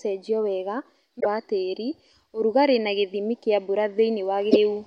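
Damaged data in a compressed stream strikes twice. From 1.19 to 1.26 s, just before "wa tĩri ũrugarĩ na", corrupted bytes make the decoder misread its frames and lose sync while it hunts for the next valid frame header, and the speech gives way to a short glitch. The same breakdown recurs from 4.48 to 4.57 s, where another brief glitch cuts across the speech for under a tenth of a second.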